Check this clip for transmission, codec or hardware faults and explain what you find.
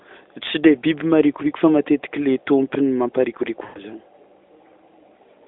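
One transmission fault stands out: a short burst of lost AMR speech frames.

From 3.64 to 3.80 s, the speech stretches and then fades away. About 120 ms of audio is missing, which fits six 20 ms frames. Radio errors made those frames fail their checksum. The decoder then kept reusing the last good pitch and vocal tract settings, lowering the gain each time. So the sound drags on briefly and fades toward silence. When good frames return, the speech comes back thin and rough for a moment.

The band, about 250 Hz to 3.6 kHz, fits AMR narrowband, likely in its 12.2 kbps mode.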